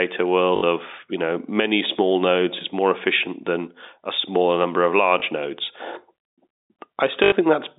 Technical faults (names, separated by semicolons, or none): packet loss with last packet repeated